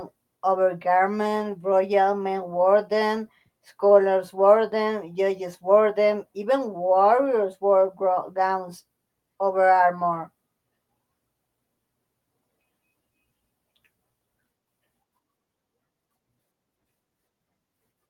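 No technical faults are audible.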